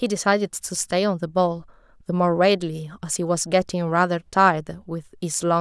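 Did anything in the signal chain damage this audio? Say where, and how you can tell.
No, nothing along the chain from capture to playback has left a mark on this recording that I can pick out by ear.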